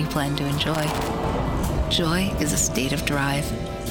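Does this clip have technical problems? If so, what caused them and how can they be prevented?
Yes. From 0.74 to 1.08 s an irregular burst of scratchy crackle cuts through the sound. That is loose connector crackle: a worn or dirty contact briefly makes and breaks, chopping the signal. Cleaning contacts and replacing worn cables or jacks prevents it.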